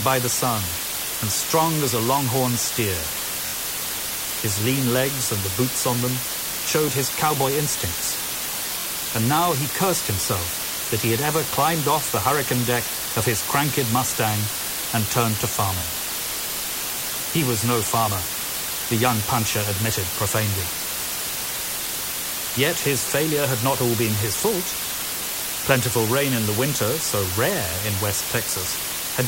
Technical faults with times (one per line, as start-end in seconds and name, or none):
0.00-29.27 low bit depth with dither
3.46-3.54 Bluetooth stutter
8.80-8.86 Bluetooth stutter
15.79-15.83 Bluetooth stutter